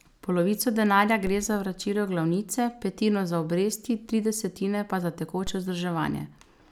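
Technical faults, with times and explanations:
1.27 s and 5.47 s, DC step: just before "za vračilo glavnice petino" and just after "tri desetine pa za", the waveform's zero line jumps by about -24 dBFS and then drains away through a 5 Hz high-pass. Each jump gives a low thump or click, not a gap, and the speech carries on intact.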